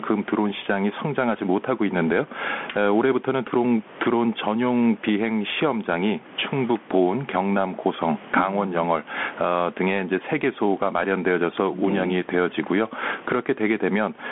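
From start to finish the speech is heard through a Bluetooth CVSD headset codec, and the narrow channel shapes everything. The band runs from about 200 Hz to 3.4 kHz, with nothing at all above 4 kHz. The sound is not just muffled, as plain low-pass filtering would leave it. The one-bit up-or-down coding, which fits a 64 kbps stream, leaves a granular hiss riding under the voice, scratchy s sounds, and harsh distortion where loud bright passages outrun the adapting step size.

Gain pumping also runs through the whole clip. The level swings by something like 15 dB as the gain lifts in the pauses and clamps down on each loud syllable. The room noise sits about 35 dB below the speech. A background rising and falling with the gain is what separates pumping from a steady noise floor or from noise suppression gating the gaps. The squashed, even loudness is likely caused by gain set far too high for the microphone, with a fast limiter or compressor hauling it back on every peak.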